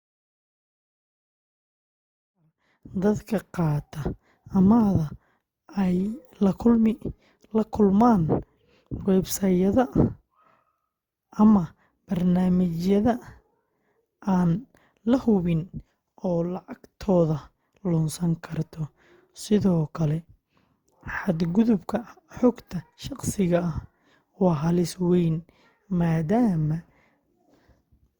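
The speech comes up on a gentle fade-in that finishes by about 3.49 s. From start to finish it has that swirly, hollow, slightly smeared character of generation loss. Consonant attacks go soft, and there's a watery texture that's worse than a single 64 kbit/s encode would give. That pattern likely comes from re-encoding through Opus around seven times, each pass landing on a new frame grid and piling fresh quantisation noise onto the last. The top end still reaches about 20.2 kHz, so the damage is texture rather than lost bandwidth.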